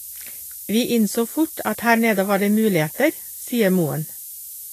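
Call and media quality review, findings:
Low bit depth with noise shaping, throughout: steady thin hiss rising sharply toward the top of the band, only about 10 dB under the speech. Fits roughly 6-bit quantisation, with the rounding error fed back and pushed into the treble.

Hissy, grainy treble throughout, no content above 14.2 kHz, consonant onsets smeared, plainly audible. Likely Vorbis compression at a low rate, consistent with about 34 kbps: coarse residue quantisation turns upper-band detail into noise, and the lowered cut-off removes the top of the band.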